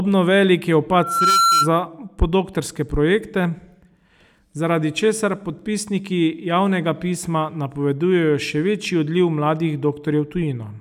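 From 0.92 to 1.71 s, loudspeaker feedback squeal: a 1.4 kHz tone swells within about 0.4 s, rising above the speech as the mic-speaker loop runs away.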